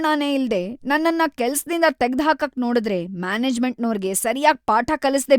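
Listening to this speech recording, nothing stood out as technically wrong at any point.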